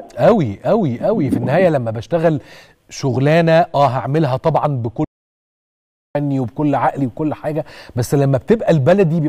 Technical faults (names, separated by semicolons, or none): audio dropout to silence